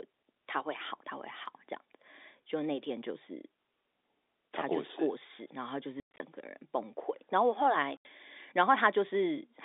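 Packet loss filled with silence cuts hard-edged holes into the speech at 6.0–6.2 s and 7.97–8.05 s, their lengths fitting 10 ms packets.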